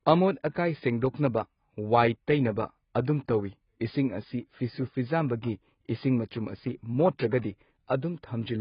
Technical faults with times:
0.00-8.61 AAC compression
0.55 pre-echo

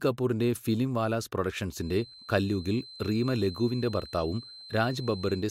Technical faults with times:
1.74-5.50 feedback whistle

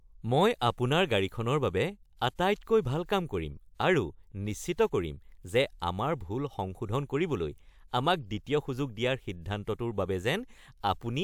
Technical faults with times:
none

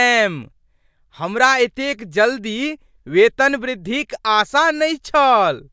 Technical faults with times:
none

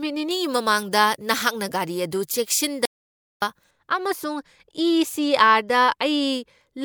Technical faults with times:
0.31-3.71 pre-emphasis left on
2.85-3.42 audio dropout to silence

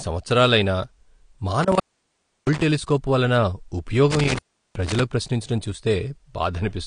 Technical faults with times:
0.00-6.87 AAC compression
1.63-2.63 intermittent contact
4.11-5.02 intermittent contact

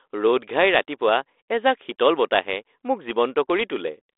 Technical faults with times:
none

